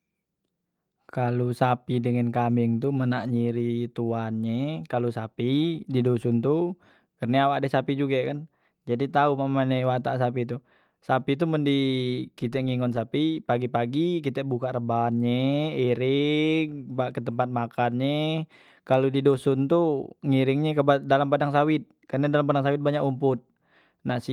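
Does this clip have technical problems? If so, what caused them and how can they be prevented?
No, nothing in this speech recording stood out as a technical problem on listening, so there is nothing here that calls for a cause or a preventive step.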